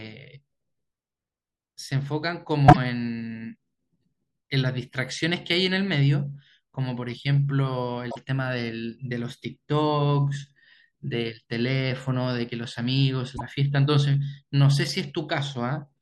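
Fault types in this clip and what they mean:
Repeated frames: a single compressed frame of speech was decoded again in place, so a 24 ms slice plays back to back and the audio stutters. This occurs at 2.68–2.77 s and 8.10–8.16 s, each with the slice played three times in all and 48 ms added, and at 13.36–13.41 s, played twice with 24 ms added. The 24 ms repeat length fits one codec frame.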